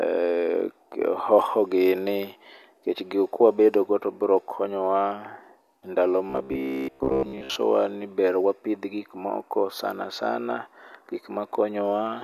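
From 6.30 to 7.57 s the speech collapses into robotic sound from repeated short buffers: a rigid, metallic buzz near 66.8 Hz that still loosely tracks the words. The likely cause is a stalled stream looping its last 15 ms for most of the span. Unlike mains hum, the buzz is confined to this span.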